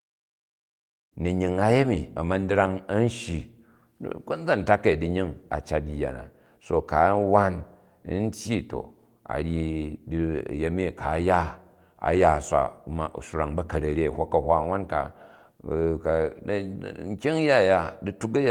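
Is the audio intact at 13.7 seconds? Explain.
Yes, at 13.7 seconds the speech runs on intact, with no dropout, click or other fault to be heard.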